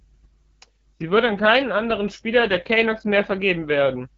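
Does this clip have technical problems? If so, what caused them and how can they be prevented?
Yes. Throughout, AMR wideband (HD Voice) codec damage is plainly audible: rough, raspy speech with nothing above 7.7 kHz, which fits a low rate such as 8.85 kbit/s. Prevent it by encoding at 12.65 kbit/s or higher.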